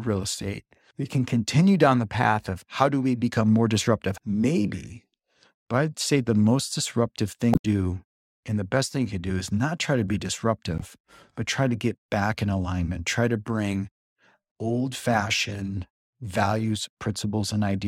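A speech recording carries two bursts of damaged data in a compressed stream. The first runs from 7.51 to 7.65 s, right after "say the most disruptive", and the second from 10.78 to 10.83 s, just before "but try to get". At each, the decoder misreads corrupted frames, loses sync and hunts for the next frame header. A spectrogram shows a sudden broadband smear or vertical streak, and the waveform shows an abrupt, jagged discontinuity.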